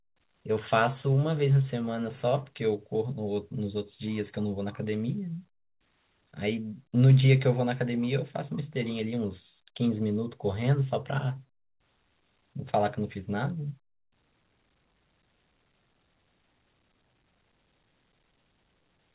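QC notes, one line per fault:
No faults found; the speech sits within the normal A-law G.711 telephone band at 8 kHz sampling, nothing above 4 kHz, with the faint level-following quantisation noise that format carries.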